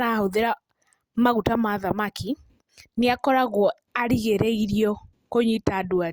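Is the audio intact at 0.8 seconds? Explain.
No. At 0.8 seconds the speech carries a gritty, inharmonic fizz that rides on its louder and brighter parts, running from the start to about 2.99 s. This is crude rate conversion. Samples were repeated by nearest-neighbour picking without filtering, which fits a 32 kHz to 48 kHz step. The result is a repeating error pattern roughly 25 dB below the speech.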